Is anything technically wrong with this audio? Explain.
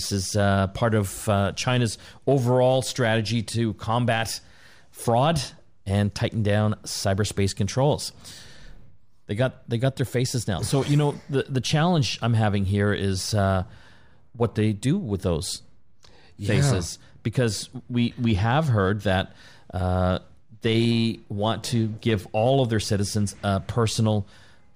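No, nothing is technically wrong with this audio.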